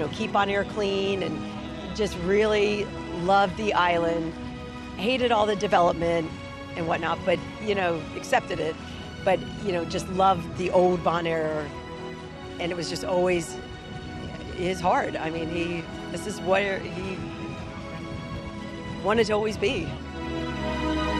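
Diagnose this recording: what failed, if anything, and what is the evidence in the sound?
Nothing failed in this recording, and no stage of the chain leaves an audible mark on it. There is no event in the sound that would point to a problem anywhere between capture and playback.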